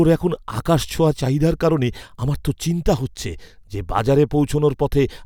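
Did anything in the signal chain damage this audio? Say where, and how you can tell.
No, nothing along the chain from capture to playback has left an audible mark on this speech recording.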